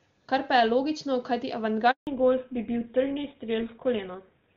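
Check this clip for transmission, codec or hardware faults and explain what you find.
Two faults appear, one right after the other: a brief dropout and then a permanent loss of high frequencies.

Handover gap, 1.91 to 2.07 s: the call switched from one network to another, and no speech frames came through during the 160 ms switch. The speech fades within a few tens of milliseconds, stays silent, and whatever was said in that window is gone.

Fallback to narrowband, 2.07 s to the end: when the new link started, the call came back on an older narrowband codec. Nothing above 4 kHz remains, so the speech turns duller and rougher than the clear wideband sound before the gap. This points to GSM full rate replacing AMR-WB.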